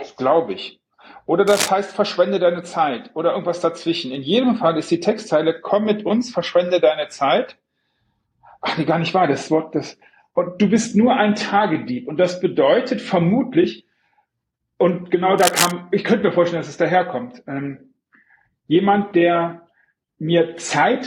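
At 1.47 to 1.68 s there's a burst of cable scratch noise, a bit below the main sound, and again at 15.38 to 15.72 s, about as loud as it. Both are dense, ragged rustling, likely from a worn cable or connector shifting its contact.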